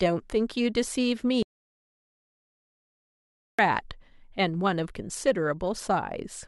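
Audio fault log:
1.43–3.59 s, audio dropout to silence: the speech cuts off to silence for about 2.16 s, with no room tone, likely from a lost input signal.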